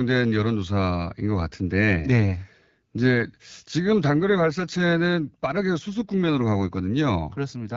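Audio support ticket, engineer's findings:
AMR rate drop, 4.14 to 6.58 s. Speech turns rougher, more synthetic; band unchanged, no gap. Restores at 6.58 s. Sound fits a network-commanded AMR-WB mode change from 12.65 down to 8.85 kbit/s, fewer bits for speech modelling, more for error protection. Probable cause: weak radio link. Light AMR-WB coding texture audible either side.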